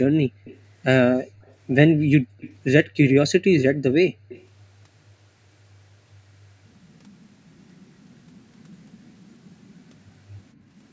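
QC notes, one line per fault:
0.44–0.59, 1.45–1.54, 2.4–2.56, 4.29–4.46 s, echo leak: a faint copy of the speech returns about 190–210 ms late, likely from incomplete echo cancellation. On a spectrogram, it shows as weak, smeared repeats of the harmonics, roughly 20–40 dB down.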